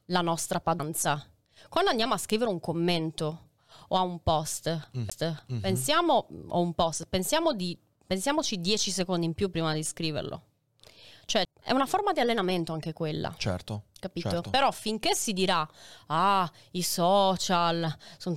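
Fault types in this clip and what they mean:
CD skip: the laser pickup jumped to a different turn of the disc's spiral, so the player muted for an instant and resumed from another point on the disc. In this speech it sounds like a tick or tiny gap followed by an abrupt jump in the audio: at 0.79 s after "la nostra", at 5.1 s after "commento o a un", and at 11.45 s just before "è una forma di". Each mute lasts only milliseconds.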